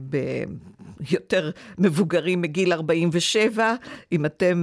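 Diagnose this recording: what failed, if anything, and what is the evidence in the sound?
Nothing in the recording stood out on listening that would point to a failure at any stage of the chain.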